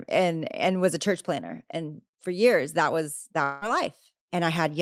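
Speech, broken at 3.43 to 3.64 s by what is likely a long network dropout: about 0.18 s of audio is lost, and the last sound is stretched into a fading buzz across the gap. Unlike a clean mute, the hole never reaches silence before the speech resumes further on.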